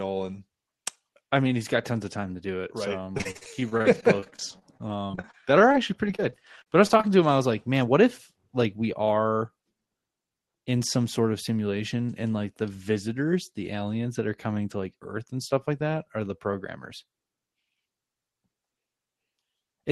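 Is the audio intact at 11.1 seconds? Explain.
No, a jitter buffer speed-up runs from 10.73 to 11.20 s. The receiver, holding more buffered audio than it wanted, cut several pitch-period-sized slices, about 40 ms in total, so the sound plays roughly 7% faster at unchanged pitch and feels briefly hurried.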